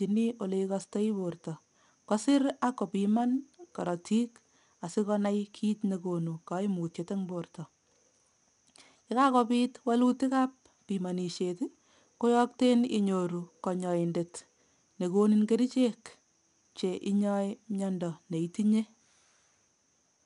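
Throughout the speech a gritty hiss rides on every loud syllable, sharp attacks sound roughened, and nothing remains above 10.6 kHz. This is plainly audible 4-bit ADPCM compression, consistent with roughly 89 kbps. Each sample is coded as a coarse step from a prediction, so the error rises and falls with the level.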